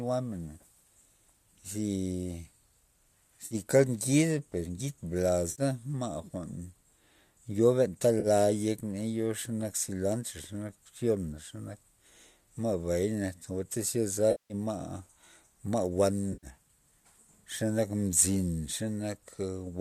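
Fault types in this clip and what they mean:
AAC frame loss with concealment: five brief dropouts where the decoder patches over missing frames, smearing 40 to 190 ms of speech into a noisy, phasey blur, longest near 14.3 s.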